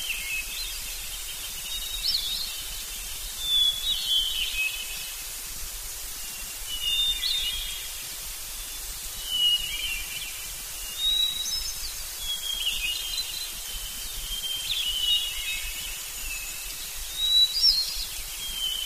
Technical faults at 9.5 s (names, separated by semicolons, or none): none